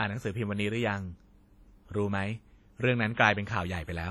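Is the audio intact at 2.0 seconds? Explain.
No, it isn't. Throughout the speech, likely WMA compression at a low bitrate, consistent with about 32 kbps, spreads quantisation noise across long transform blocks and discards weak spectral detail, so 2.0 seconds sounds heavily washy and ringing, with hiss pumping alongside the voice.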